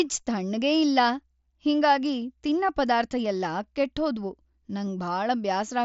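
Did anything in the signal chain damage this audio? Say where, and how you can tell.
No, nothing in the chain has damaged it; the speech comes through the Bluetooth mSBC headset codec at 61 kbps, which leaves its usual light grain and a band limit with nothing above about 7.7 kHz.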